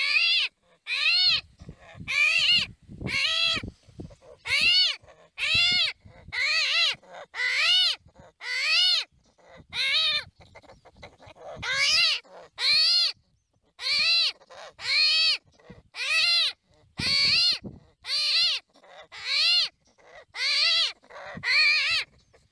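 Nothing in the audio gives a listener anything to flag at any point along the way.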